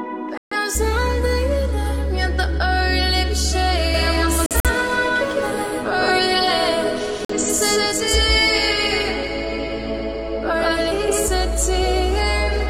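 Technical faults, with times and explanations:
0.38–0.57 s, 4.46–4.70 s and 7.25–7.34 s, corrupt frame muted: the sound drops abruptly into dead silence for roughly 0.1 to 0.24 s each time. Damaged compressed frames got rejected by the decoder and the player filled their slots with silence, so timing stays intact.
3.94–11.28 s, doubled audio track: a second, full-band copy of the sound trails the original by around 150 ms at about the same level, with no room tone or decay. It's likely a second capture path mixed in out of step.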